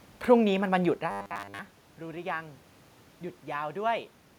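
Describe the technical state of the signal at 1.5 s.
Robotic sound from repeated short buffers runs from 1.11 to 1.59 s, likely from starved playback looping 10 ms chunks, imposing a rigid 100 Hz metallic buzz over most of the speech.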